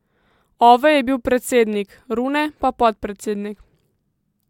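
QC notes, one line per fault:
No faults found on this speech recording; nothing to flag.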